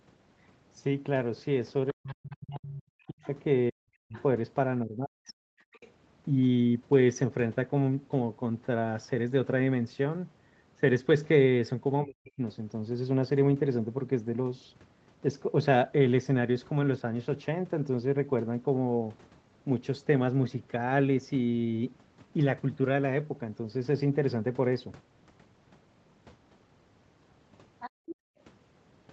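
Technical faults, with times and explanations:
1.92–5.34 s and 12.04–12.39 s, speech suppressed in double talk: the voice dips by as much as 40 dB, likely because the echo canceller ducked it while both sides talked.
3.22–4.23 s, 5.3–5.91 s and 27.8–28.15 s, other side's voice leaking through: a second voice, about 25 dB under the talker and about 15 dB under at the last spot, likely residual loudspeaker echo.
5.62–5.72 s and 27.9–28.39 s, background gated by the echo canceller: the room tone drops out by about 40 dB while the canceller clamps the mic, then comes back.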